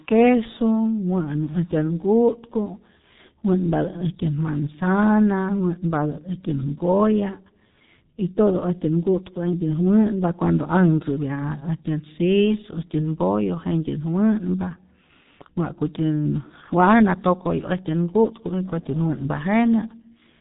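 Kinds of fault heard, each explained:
G.723.1 codec: heavy low-bitrate speech coding, fitting about 6.3 kbit/s, leaves the speech muffled and hoarse; spectrograms show nothing above 3.8 kHz and smeared consonant bursts.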